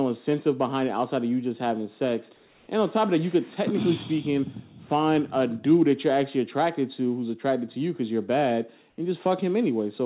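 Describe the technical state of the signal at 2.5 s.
At 2.5 s the background is replaced by comfort noise, from 2.36 to 2.68 s (320 ms). The likely cause is discontinuous transmission: the sender stopped sending during this pause, and the receiver filled it with a steady, featureless synthetic hiss shaped like the background, which sits about 35 dB below the loudest passages. Unlike a gate or dropout, the gap never goes silent. The noise is only about 2 dB quieter but loses the real background's texture.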